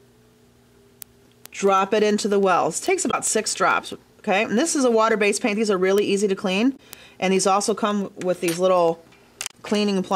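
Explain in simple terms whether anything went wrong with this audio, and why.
Two things went wrong. Word clock ticks run from 0.15 to 10.11 s, roughly ten a second, because the receiving device's clock wasn't locked to the sender's, so single samples kept slipping. Damaged data in a compressed stream causes short blips at 3.07–3.14 s, 6.73–6.80 s and 9.47–9.54 s, where corrupted bits made the decoder lose its place.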